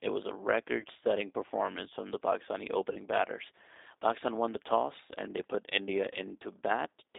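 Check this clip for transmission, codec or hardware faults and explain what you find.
Two faults are present: G.729 codec coloration across the whole clip, and three short spots of VoIP packet loss concealed by the speech codec.

The G.729 codec damage runs from start to finish and is plainly audible. The speech is confined to roughly 300 Hz to 3.7 kHz, which points to an 8 kbit/s G.729A link. This codec rebuilds each short frame from a vocal tract filter, a pitch predictor and a handful of pulses. That sparse pulse excitation gives the speech a slightly rough, synthetic grain. A plain telephone band-limit would leave the speech smooth, however dull.

The VoIP packet loss concealed by the speech codec occurs at 0.80 to 0.86 s, 2.93 to 2.98 s and 6.13 to 6.17 s. The first gap fits about 30 ms of lost audio and the other two about 20 ms each. When packets went missing, the decoder kept extrapolating from its last pitch and filter while lowering the gain. 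The speech smears into a brief buzzy tone or coloured noise that fades, rather than dropping to silence or clicking as a raw dropout would. Because each frame depends on the previous one, the speech stays weak for a moment after each gap.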